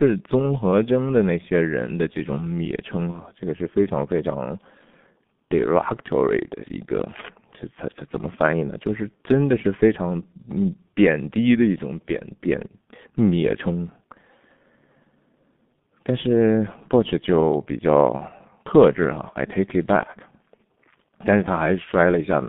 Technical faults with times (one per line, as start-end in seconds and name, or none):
0.00-22.49 G.723.1 codec
3.11-3.17 VoIP packet loss concealed by the speech codec
18.17-18.22 VoIP packet loss concealed by the speech codec